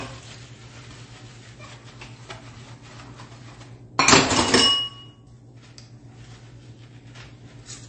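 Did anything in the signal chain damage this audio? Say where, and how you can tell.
Yes, at the codec stage. Throughout the audio nothing sits above 8.3 kHz, and the smeared, swirly artefacts of a heavy low-bitrate encode are present. This is likely low-bitrate audio saved at a high bitrate: a roughly 32 kbit/s MP3 re-encoded at 320 kbit/s, which cannot restore what the first pass discarded.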